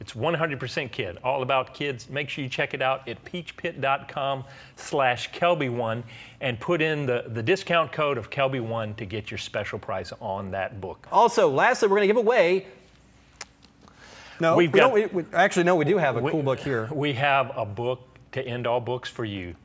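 No technical faults are audible.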